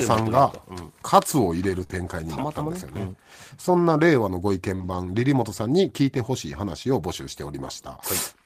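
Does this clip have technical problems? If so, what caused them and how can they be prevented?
Yes. This speech clip has two kinds of network-related fault.

Lost packet rebuilt from error correction occurs at 1.79 s and again from 4.80 to 4.98 s. In each case lost packets never arrived, and the decoder played the low-bitrate redundant copy carried in the following packet (Opus in-band forward error correction). There is no gap, but those stretches sound rougher and noisier. The later one rebuilds about 100 ms in total, which fits five separate 20 ms packets. Prevention: reduce packet loss on the path, or raise the FEC bitrate budget so the redundant copies are cleaner.

Short concealed packet loss occurs at 1.83 to 1.87 s and 1.87 to 1.91 s, two back-to-back 20 ms holes, and at 4.75 to 4.82 s, a 40 ms hole. No usable data reached the decoder in time, so it extrapolated the last sound, continuing its pitch or shaped noise, then crossfaded into real audio. 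The result is a brief smear or wobble where short sounds can drop out. Prevention: improve network stability and use a larger jitter buffer so late packets still arrive before playout.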